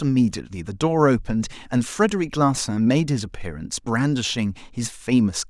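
No technical faults are audible.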